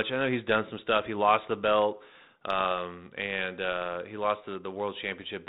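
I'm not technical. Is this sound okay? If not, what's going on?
No. There are two faults in this speech recording.

At about 2.59 to 2.66 s, right after "lost the belt" and before "and uh he lost", you hear a short rough crackle with a quick pop and a wobble in loudness. These are bit errors on an ADPCM link, the kind of compressed digital connection a cordless or internet phone uses. A handful of the ones and zeros carrying the sound were flipped in transit. This type of coding works by predicting each sample of sound from the last, so one wrong value throws off that prediction, and the damage rings on for a few thousandths of a second before the decoder settles.

At 4.79 s, just after "and uh he lost", there is a single sharp click. These are dropped samples. The stream likely lost a couple of its individual measurements, so the sound wave suddenly jumps to a later point instead of flowing smoothly. 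The gap is far too brief to cut out any sound you could notice. The abrupt jump is what makes the click.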